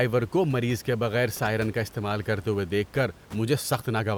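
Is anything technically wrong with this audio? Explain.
No, nothing is technically wrong.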